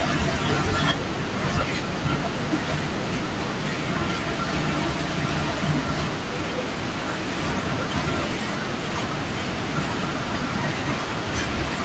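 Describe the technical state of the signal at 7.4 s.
At 7.4 s the speech is intact, with no fault at that moment, only the ordinary call-path band limit that leaves nothing above 8 kHz.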